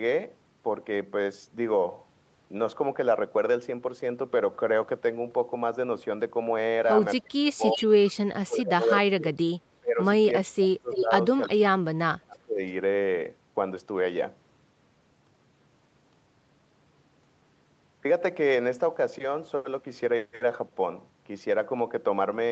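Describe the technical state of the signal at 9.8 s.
Speech suppressed in double talk, from 9.8 to 9.99 s: the speech dips by up to about 30 dB for roughly a fifth of a second. The likely cause is an echo canceller that could not separate this talker from loudspeaker echo and attenuated both.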